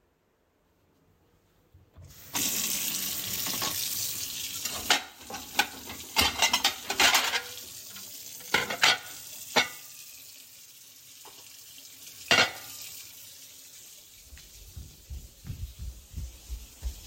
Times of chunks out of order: none

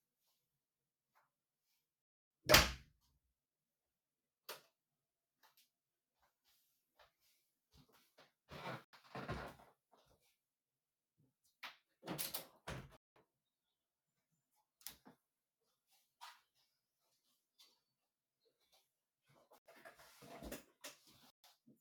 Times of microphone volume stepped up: none

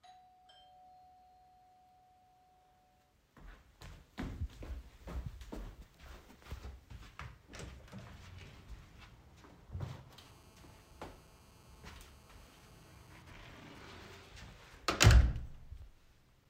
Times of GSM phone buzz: 10.20-13.22

